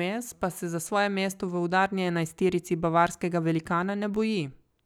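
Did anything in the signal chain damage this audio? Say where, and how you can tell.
No, no signal-chain damage audible.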